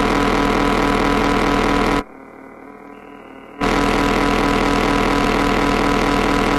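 At about 1.19 s there is damaged data in the compressed stream: a brief blip lasting under 20 ms. Part of the encoded data at that point is corrupt, so the decoder misreads the affected frame, loses sync and hunts for the next valid frame header before normal playback resumes. On a spectrogram it shows as a narrow vertical stripe that does not match the surrounding sound, and on the waveform as an abrupt discontinuity.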